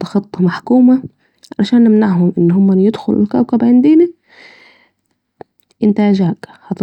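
No technical faults can be heard anywhere in the speech recording, and the signal stays steady throughout.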